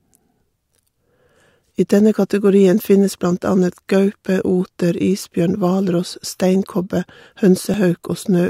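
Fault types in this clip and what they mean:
Dropped buffer (overrun): at 7.74 s the speech jumps ahead slightly, with no gap of silence. This is likely because samples weren't collected before being overwritten, so a few milliseconds of audio vanished and the surrounding edges were spliced together directly.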